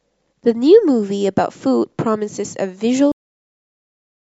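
At 3.12 s the final buffers were never written, a cut-off end: the speech stops mid-sound and drops straight to digital silence without any decay.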